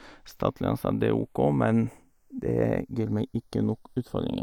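Throughout, the channels are drifting apart. Two unsynchronised clocks, off by about 50 ppm, let the inter-channel delay creep to roughly 0.2 ms, giving slow flanging in mono.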